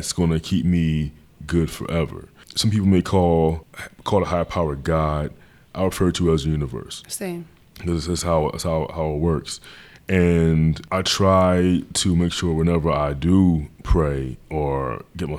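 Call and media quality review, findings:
No faults found in the speech clip. Nothing to log against capture, transport or playback for this recording.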